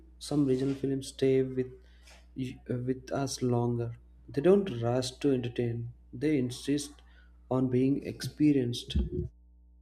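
Throughout the speech, mains hum sits roughly 25 dB below the signal: a steady 60 Hz tone from power-line coupling, drawn on a spectrogram as a flat line with some low harmonics above.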